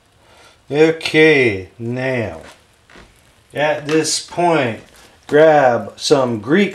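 Nothing technically wrong turns up in this audio; there's no fault to point to anywhere in it.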